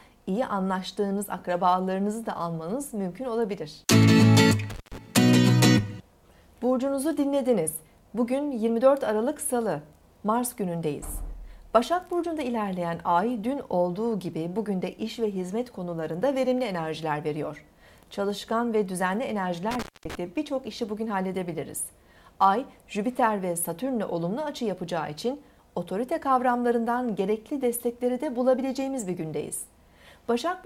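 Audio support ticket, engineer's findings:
Intermittent contact, loose cable or plug connection opening briefly. Two dropouts: 4.70 to 4.98 s (line open about 157 ms) and 19.71 to 20.15 s (about 227 ms). Sound cuts out with crackle at each edge and faint hiss during the gap.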